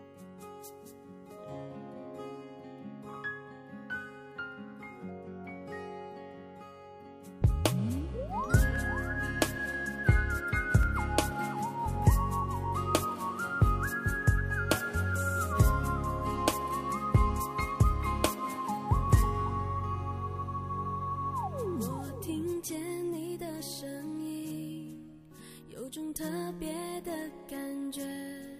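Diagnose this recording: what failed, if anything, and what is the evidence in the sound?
The driver or buffer stage likely skipped a fraction of a millisecond of samples, twice. These dropped samples make the waveform jump straight to a later value, so the sound carries two single sharp clicks, at 8.76 s and 10.83 s, with nothing audibly missing.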